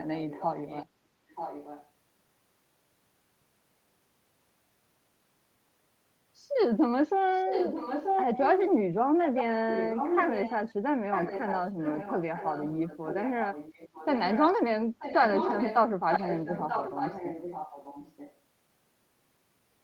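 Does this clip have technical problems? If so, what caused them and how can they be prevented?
Yes, there is echo leak at 0.19–0.86, 1.29–1.9, 7.34–8.7, 9.22–10.74, 11.12–14.43, 14.99–15.78 and 16.1–18.37 s. A copy of the speech returns 934 ms late, from well below to as loud as the original. This is likely a far-end loudspeaker whose echo canceller let its microphone pickup through. Unlike room reverberation, it is a distinct repeat after a long gap, not a smeared tail. Using a headset at that end, or a working echo canceller, prevents it.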